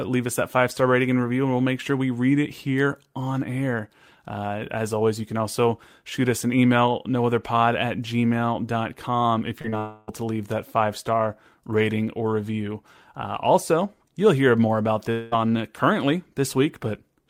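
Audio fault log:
9.61–9.66 s and 9.70–9.74 s, short concealed packet loss: two brief smears where about 20 ms each went missing, bridged by extending the preceding sound, then blended back.
9.78–10.09 s and 15.11–15.34 s, long network dropout: the last sound stretches into a fading buzz or hiss for 0.3 s, then 0.2 s, likely because audio stopped arriving. Those stretches are lost.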